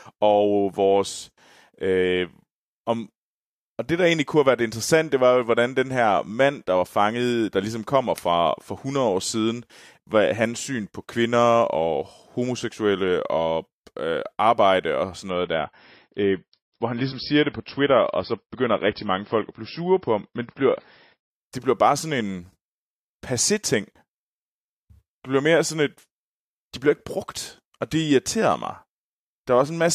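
At 15.30 s, right after "øh arbejde og sådan", the speech abruptly loses its top end with no gap: an adaptive stream at a lower bitrate. The player switched to a cheaper encoding when throughput fell. For six seconds nothing is present above 5.6 kHz, sibilants turn dull and smeared, and codec artefacts thicken, which fits a drop from around 128 kbit/s to around 24 kbit/s MP3. Full bandwidth returns at 21.30 s, just before "det bliver bare sådan".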